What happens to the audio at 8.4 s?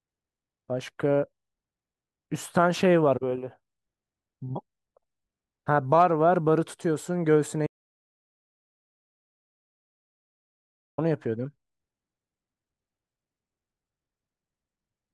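At 8.4 s the speech is inside an audio dropout to silence running from 7.67 to 10.98 s, about 3.3 s lost. The input likely disconnected while silence kept being written: the speech cuts out abruptly with no room tone, showing as a flat waveform and a blank spectrogram.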